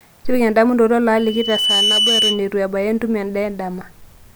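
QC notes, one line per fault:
1.17–2.49 s, loudspeaker feedback squeal: a single tone at 3 kHz rises out of the speech, swelling over roughly half a second until it sits about 5 dB above the voice, then holds until it cuts off at 2.49 s. The microphone is hearing its own loudspeaker, and at 3 kHz the loop gain exceeds unity, so that one frequency keeps reinforcing itself instead of dying away, giving a steady whistle over the speech.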